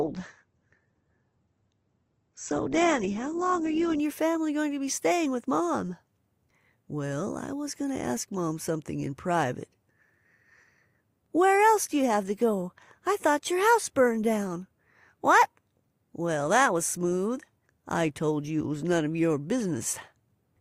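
From 0 to 4.0 s, the player was on an adaptive stream starting at a low bitrate, fetching a cheap version so playback could begin before it had measured the connection. Nothing reaches above about 8.2 kHz, so the speech sounds dull and lisping, with coarse codec smearing that fits an Opus stream near 12 kbit/s. At 4.0 s it steps up, most likely to around 64 kbit/s, and the treble returns abruptly with no gap.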